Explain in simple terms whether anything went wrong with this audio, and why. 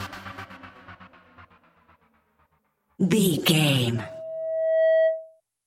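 Something did go wrong, and it's loudspeaker feedback squeal. From about 3.95 s to 5.41 s, a steady tone around 643 Hz creeps in, swells over roughly a second, and ends up a bit louder than everything else. That happens when a microphone hears the speaker it's feeding: at that one pitch the sound keeps getting re-amplified around the loop, growing on its own until it becomes a howl.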